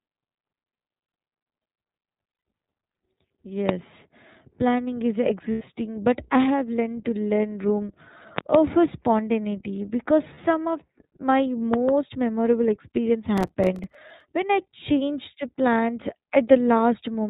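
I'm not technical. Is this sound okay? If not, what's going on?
No. The whole clip sounds a bit muffled, rough and slightly robotic. That is the iLBC codec, a phone-call compression method that keeps nothing above 4 kHz and rebuilds the speech from a simplified model, so crispness is lost.

At 2.3 to 2.45 s, 5.52 to 5.62 s and 10.34 to 10.39 s, the sound turns briefly into a held, buzzy, breathy smear. These are lost iLBC frames: chunks of data went missing, and the decoder filled the gaps by repeating the last bit of sound with added noise.

Sharp loud pops appear at 3.69 to 3.71 s (one pop), 8.38 to 8.57 s (two pops) and 11.74 to 11.91 s (two pops), sitting on top of the speech. These are loud pops, likely caused by sudden electrical jolts from a plug, switch or static.

From 13.38 to 14.21 s there is a gritty, crackling tearing. This is processor overload crackle: the computer fell behind and missed roughly twenty deadlines over that stretch, leaving tiny gaps of silence a few milliseconds long that together sound like crackle.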